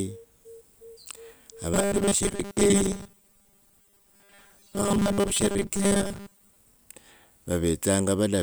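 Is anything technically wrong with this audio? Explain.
Yes. From 1.74 to 6.56 s the speech turns into robotic sound from repeated short buffers: a rigid 200 Hz metallic buzz, likely from a 5 ms chunk looped while most real audio is skipped. Unlike plain distortion, the buzz stays fixed while the words loosely persist.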